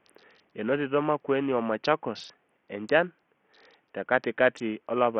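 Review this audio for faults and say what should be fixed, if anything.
Throughout the speech, treble flickers and drops out under gritty noise, likely Bluetooth SBC compression starved near 48 kbps; the spectrogram shows blocky, gappy upper bands. Record over a wired path or raise the SBC bitpool.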